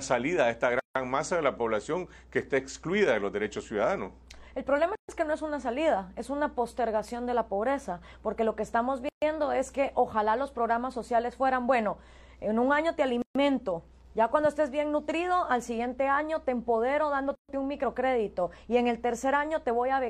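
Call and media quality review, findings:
Gap at a join of encoded pieces: separately encoded 4 s segments joined without trimming encoder delay or final-frame padding. Silences open at 0.80 s (0.16 s long), then 4.95, 9.09, 13.22 and 17.35 s (0.13 s each), with smeared edges, resuming where cut.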